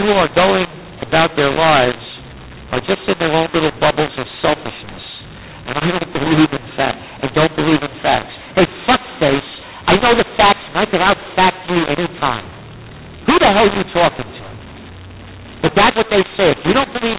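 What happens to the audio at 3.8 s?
At 3.8 s the speech has a mu-law and A-law mix-up, present throughout. Audio coded as mu-law is decoded as A-law, so levels scramble. Speech turns harsh, and pauses fill with noise.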